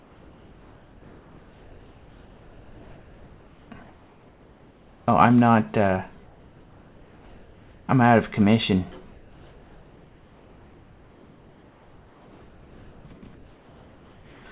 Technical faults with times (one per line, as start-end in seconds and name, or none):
3.83-5.07 comfort noise in place of the background
9.12-13.05 comfort noise in place of the background
13.35-14.46 comfort noise in place of the background